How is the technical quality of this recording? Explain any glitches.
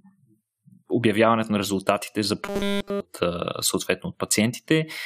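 One glitch stands out: robotic sound from repeated short buffers between 2.43 and 3.01 s. The speech turns into a rigid, metallic 200 Hz buzz that roughly tracks the words. The likely cause is starved playback repeating about 5 ms of audio throughout that stretch, skipping the real signal.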